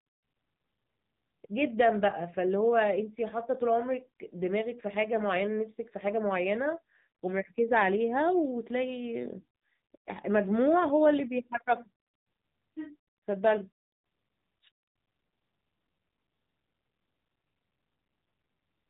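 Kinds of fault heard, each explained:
AMR narrowband mobile codec: the speech went through the AMR-NB phone codec at a low rate, likely about 7.4 kbps, modelling the voice from a few pulses per frame and cutting everything above 4 kHz, so it sounds muffled, buzzy and plainly synthetic throughout.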